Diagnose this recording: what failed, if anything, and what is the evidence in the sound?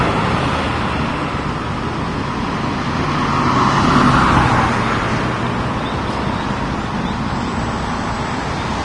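The fault sits at the codec stage and runs through the whole recording. Nothing reaches above 10.6 kHz, and the treble below that line has a hissy, granular texture, with tones roughened and attacks smeared. This is likely Vorbis compression at a low setting, consistent with a bitrate of around 30 kbps. The encoder starved the residue of bits, so fine high-frequency detail was replaced by noise of similar energy. A spectrogram would show a flat ceiling at 10.6 kHz with speckled, blotchy energy under it, and the waveform would show softened transient edges.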